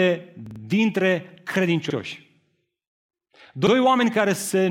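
Repeated buffer at 0.46 to 0.60 s, where one 46 ms slice of speech plays three extra times, and again at 1.90 s and 3.67 s with one extra play each. Fresh audio arrived late, so the player reran its last block, consistent with a 2048-sample buffer. The result is a hard-edged stutter, with nothing audibly skipped afterwards.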